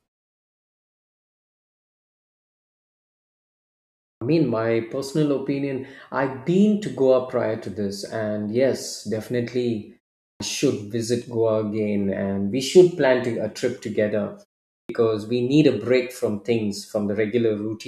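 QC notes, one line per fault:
4.13 s, 10.3 s, 14.8 s: clipped start after a pause. The first roughly 84, 101 and 94 ms of sound after silence go missing, at the opening of "mean my personal opinion" after the 4.13 s lead-in, after "this and yes definitely" following a 0.38 s gap, and at the start of "we need a break" after a 0.43 s gap. The output device sleeps during silence and swallows onsets while re-locking. On the waveform, envelopes jump from flat to full level, and the spectrogram shows missing onset transients.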